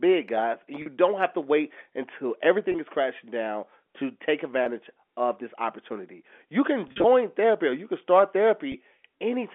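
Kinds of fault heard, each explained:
Packet loss with pitch repetition: lost audio is bridged by repeating the last pitch period, so each gap sounds briefly held and buzzy. 20 ms dropouts fall at 2.72, 4.64 and 8.72 s, a 40 ms one at 0.82 s, and a scattered cluster at 6.88–7.04 s.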